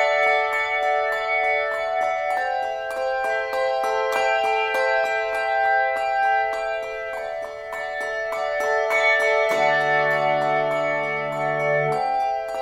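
No faults can be heard anywhere in the recording.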